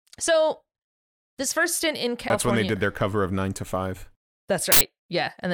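At 2.30 s, and again from 4.72 to 4.81 s, the speech is broken by damaged data in a compressed stream. Corrupted bytes make the decoder misread or reject frames and hunt for the next valid header, so the sound there is a chirp, squawk, click or brief hole. On a spectrogram this shows as a narrow broadband streak or a blank slot. On the waveform it is a sudden discontinuity, instant at 2.30 s and about 90 ms wide later.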